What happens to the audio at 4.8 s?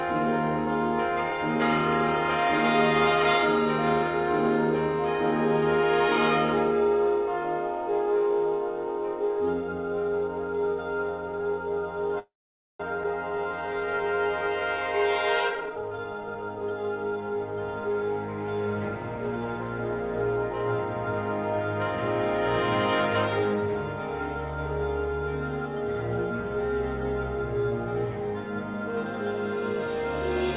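Nothing goes wrong at 4.8 s: the audio carries on intact through that moment, with only the steady 4 kHz band limit of the call path, which fits a G.711 mu-law telephone codec.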